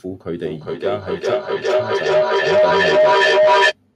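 From 0.43 s to 3.77 s a feedback howl builds over the speech. A microphone-to-loudspeaker loop with more than unity gain re-amplifies each pass, repeating roughly every 0.4 s and narrowing to a tone near 700 Hz, peaking about 12 dB above the speech.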